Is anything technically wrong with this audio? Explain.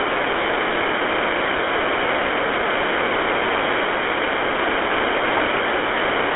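Yes. Throughout, the speech carries GSM full-rate codec damage: sparse pulse excitation adds gravelly buzz, fitting 13 kbps, within a 300 Hz to 3.5 kHz band. Plain band-limiting would muffle without this roughness.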